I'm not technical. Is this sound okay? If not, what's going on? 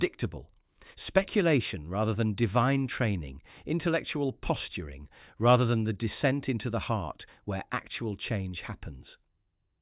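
Yes, nothing in this recording points to a technical problem.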